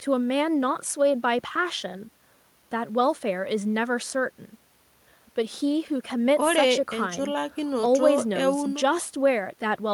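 No technical faults can be heard anywhere in the recording.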